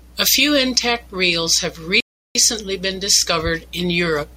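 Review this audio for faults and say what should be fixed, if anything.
A rebuffering stall silences the speech from 2.00 to 2.35 s. The player ran out of downloaded audio, then resumed exactly where it stopped, adding 0.35 s. The waveform goes flat and the spectrogram shows a blank gap. A deeper playback buffer would prevent it.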